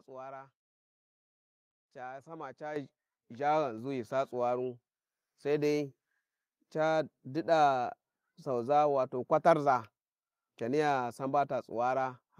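At 2.76 s, after "ca sama", the microphone volume stepped up by about 8 dB, and again at 3.78 s by about 3 dB before "ghi sa tsuwaru". Each is an instant input-gain jump lifting voice and background together, not a gradual gain ramp.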